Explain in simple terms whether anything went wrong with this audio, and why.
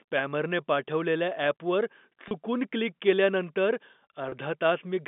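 Twice, a small piece of the transmission went missing, and the phone system covered it with packet loss with pitch repetition: it replayed the last tiny cycle of the voice to fill the hole. Each gap lasts about 30 ms, which fits a single lost packet. At 2.28 s, between "स्पॅमरने पाठवलेल्या ॲपवर" and "क्लिक केल्यानंतर", and again at 4.29 s, right after "क्लिक केल्यानंतर", the speech briefly sounds held and slightly buzzy over the narrow telephone sound.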